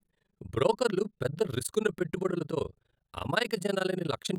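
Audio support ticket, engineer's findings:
Overlap-add ripple, entire clip. Speech level pumps at around 30 Hz, depth about 60 dB, giving a harsh flutter. Probable component: frame-based resynthesis stage whose window overlap doesn't sum to constant gain. Waveform: evenly spaced deep notches. Spectrogram: regular vertical dark stripes.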